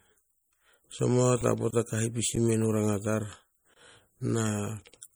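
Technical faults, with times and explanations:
Throughout, MP3 compression. The speech has a watery, swirling quality and the damage is plainly audible. Sibilants come out with metallic chirps, and consonant onsets smear. Weak frequency components drop in and out between frames. This is likely from MP3 encoding with too few bits, which fits a low bitrate near 48 kbps. The encoder discards detail it judges inaudible, and here that detail is missed.
1.41 s and 2.36 s, underrun with held sample. The waveform freezes flat for about 5 ms at 1.41 s and about 10 ms at 2.36 s, the second just after "ka hipisi". The output buffer ran dry, and the converter held its last value. No audio is lost. Playback resumes exactly where it stopped, so each join is a soft tick rather than a sharp click.
1.71–1.73 s and 3.74–3.76 s, gap between chunks. Two holes of about 23 ms each, spaced 2 s apart. The first falls just before "ka hipisi", the second just after "ranga tar". 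The audio was delivered in 2 s chunks, with silence inserted at each join. Nothing is removed, but the speech is interrupted, and the regular spacing gives these gaps away.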